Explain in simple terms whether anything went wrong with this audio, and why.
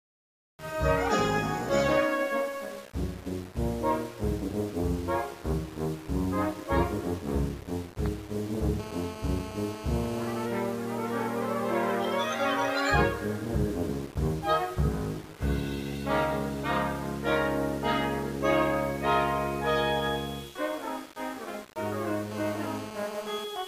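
Two stretches carry GSM phone buzz, from 8.80 to 10.46 s and from 22.31 to 23.45 s. A 2G mobile phone on a call nearby pulses its radio about 217 times a second. The audio equipment picked up those pulses, adding a hard, raspy buzz that has nothing to do with the sound itself.

Right after that, at 23.56 s, there is a brief tick of GSM signalling bursts. The same phone, still on a call but with its user silent, sent only a short group of radio pulses, which the equipment turned into a quick click-like buzz.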